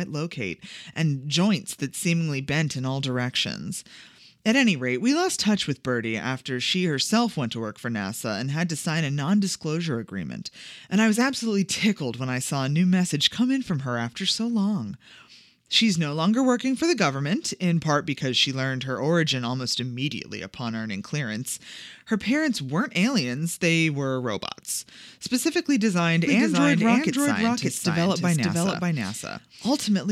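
Right after "were robots specifically designed", at about 26.25 s, a doubled audio track kicks in and runs to the end. A second full-band copy of the speech trails the original by roughly half a second, at close to the same level, with no decay or room colour, and it appears abruptly. That's most likely the signal being captured twice, once through a slower path, or an edit leaving two copies out of step.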